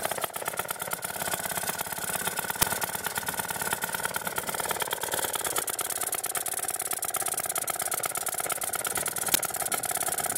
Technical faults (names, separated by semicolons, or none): uninitialised buffer